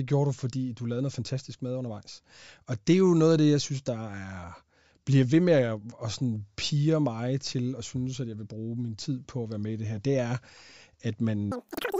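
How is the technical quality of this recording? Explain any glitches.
There's one glitch worth flagging, right at the tail end. From 11.52 s to 11.99 s the speech suddenly goes high and hurried: a wrong sample rate fault. The samples are being played back faster than they were captured, with no rate conversion. Everything runs about 2.76 times too fast and jumps up roughly 17.6 semitones, which fits 16 kHz audio being played as if it were 44.1 kHz. You get that squeaky, chipmunk-like rush for the last half second.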